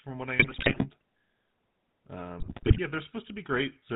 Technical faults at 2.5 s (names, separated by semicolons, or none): GSM full-rate codec; GSM bit errors